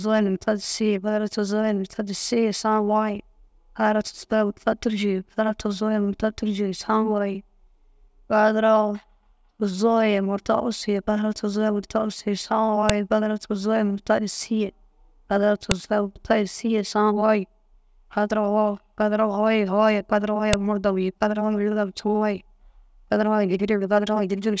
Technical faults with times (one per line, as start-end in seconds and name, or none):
12.89 file header played as audio
15.71 file header played as audio
20.53 file header played as audio